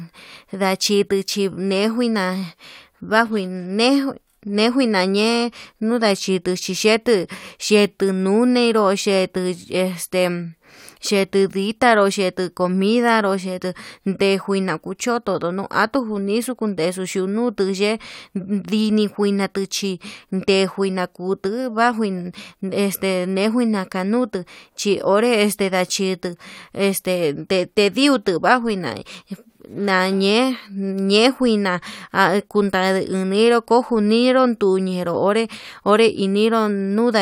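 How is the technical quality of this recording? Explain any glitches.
The technical quality of this recording is good, and there are no glitches to explain.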